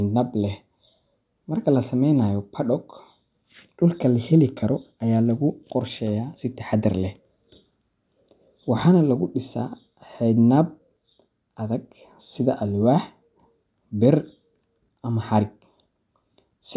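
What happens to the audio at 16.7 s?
Nothing goes wrong at 16.7 s; the speech runs through that moment intact, with no dropout, click or distortion.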